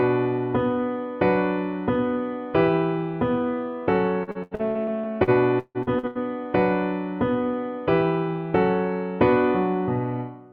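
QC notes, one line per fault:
4.23–6.18 s, repeated packet loss (robotic sound): choppy, gappy sound as about a dozen holes (longest 154 ms) are patched by repeating preceding audio.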